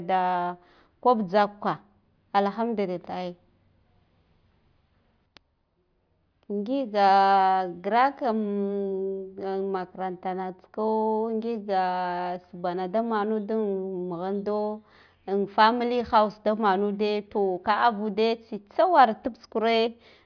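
No technical faults can be heard anywhere in the speech, so there are none to describe in time order.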